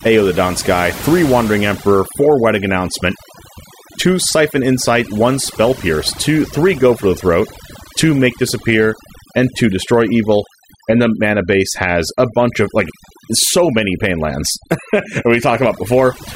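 Overdone noise removal runs through the whole speech clip: aggressive band gating leaves near-silent gaps with twinkling specks and strips quiet voice detail.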